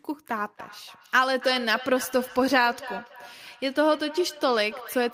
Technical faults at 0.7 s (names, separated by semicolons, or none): feedback echo between two devices